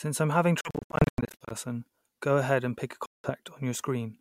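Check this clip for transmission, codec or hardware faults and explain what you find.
Two gaps are present, both consistent with a Bluetooth dropout. From 0.61 to 1.54 s, after "I'm having", the sound cuts out repeatedly, losing about 0.53 s in total, with the longest hole near 0.1 s. From 3.06 to 3.30 s, after "ahead and pick a", about 0.18 s goes missing. The likely cause is wireless packets arriving too late and being discarded. Output falls silent with abrupt edges or a fade of a few milliseconds, then resumes further along, as though playback had continued underneath.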